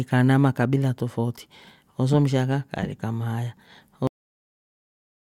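A cut-off end arrives at 4.07 s: the speech stops partway through a sound and falls straight to digital silence for the remaining 1.3 s, with no natural decay. The final stretch of audio was never written or played out, so the recording ends mid-utterance.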